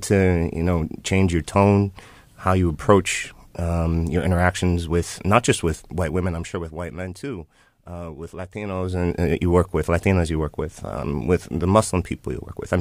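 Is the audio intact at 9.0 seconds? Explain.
No, 9.0 seconds falls inside a burst of zipper noise running from about 8.64 to 9.15 s, just before "uh you work with". The level changes by roughly 15 dB there, but the gain is stepped rather than smoothed, at about fifty jumps a second. Each jump leaves a tiny click, so you hear a fine ticking, zipping texture riding on the speech while the level moves.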